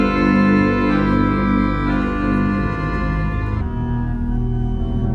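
From 3.61 s to the end, a wrong sample rate fault drops the sound about 5.5 semitones and slows it to 0.726 times normal speed. Both shift by the same ratio, which fits 44.1 kHz material played back at 32 kHz without any rate conversion.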